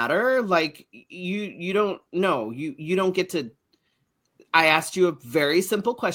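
No technical faults can be heard in the speech recording, with the signal holding steady throughout and no disturbance standing out at any point.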